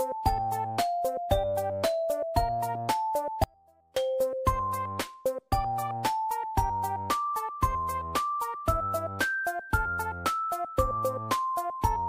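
At 3.44 s the sound drops out abruptly until 3.96 s, about half a second, leaving only a faint trace roughly 30 dB down rather than silence. That's an audio dropout to a faint residue, likely a break in the wanted signal while the downstream path stayed live.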